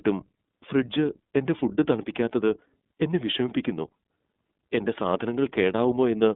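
Speech, carried throughout by the iLBC codec. Its band runs from about 200 Hz to 3.6 kHz, so a spectrogram shows an empty region above that ceiling. The independently coded frames give the voice a plainly audible rough, synthetic edge, which fits iLBC's 30 ms, 13.33 kbps mode. At 1.58 to 1.62 s there are lost iLBC frames: the decoder fills the gap by repeating the last pitch cycle with added noise. This is heard as a brief buzzy, held vowel and fits a single missing 30 ms frame. On the waveform it appears as a short run of near-identical periodic cycles, and normal speech resumes immediately after.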